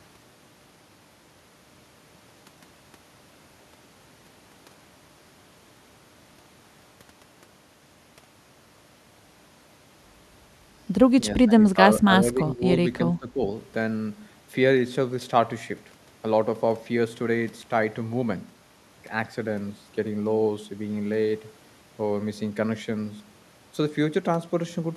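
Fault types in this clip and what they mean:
speech suppressed in double talk: speech dips by up to about 15 dB, likely echo-canceller gain ducking during overlapping talk.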